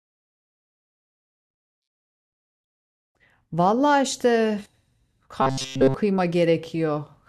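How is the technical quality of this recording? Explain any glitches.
The recording has three audible glitches, two of one kind and one of another.

Robotic sound from repeated short buffers, 1.56 to 1.88 s and 5.42 to 5.94 s: the audio is likely replaced by one 7.5 ms slice looped over and over, which imposes a rigid, metallic 133 Hz buzz.

Audio missing between chunks, at 4.66 s: roughly a tenth of a second is likely lost at a 2.5 s chunk boundary, and the two sides are spliced together as an abrupt skip.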